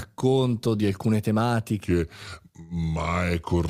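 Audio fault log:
1.85–3.69 s, section at the wrong speed: the speech suddenly turns deeper and more drawn out, roughly three semitones lower, running at 0.82 times its proper rate until the end. Pitch and pace drop together, so this stretch was likely played back against the wrong clock.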